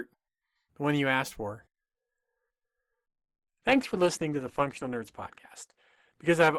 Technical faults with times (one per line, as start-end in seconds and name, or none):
3.57-6.59 adaptive stream at a lower bitrate